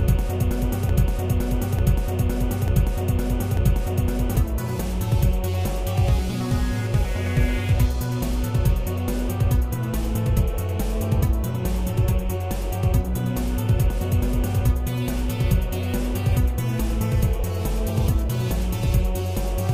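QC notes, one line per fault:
0.89–4.36 s broken-record loop: a 0.89 s piece repeats exactly four times, likely a stall resending the last held fragment, so the intended audio is lost.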